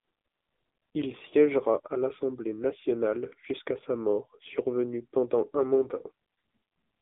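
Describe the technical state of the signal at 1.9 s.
At 1.9 s the speech carries the AMR narrowband mobile codec artefact for the whole clip: nothing above 3.8 kHz, a line band of about 200 Hz to 3.7 kHz, and a heavy buzzy, synthetic quality that fits a low rate near 6.7 kbps. A plain telephone band-limit filter would only muffle the sound, but here the coarse pulse-driven vocal-tract model rebuilds the voice itself.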